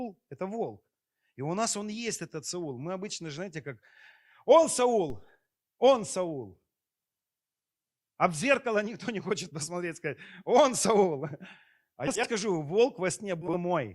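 At 5.10 s a DC step shifts the zero line of the waveform, as when an input carrying an offset is switched in or a converter recalibrates. It sounds as a single low thump, after which the offset holds to the end without stepping back or decaying. A click or dropout would interrupt the sound, but here the sound carries on unchanged and only the baseline has moved.

Frames out of order appear twice, first at 12.07 to 12.28 s, where two neighbouring blocks of about 80 ms each swap places, and then at 13.41 to 13.57 s, with two blocks of about 60 ms each. The block lengths fit runs of four and three 20 ms frames. Each stretch plays with its halves exchanged and becomes a brief garbled flutter. Unlike a skip or dropout, nothing is lost and no gap opens, because all the material is still there, only in the wrong order.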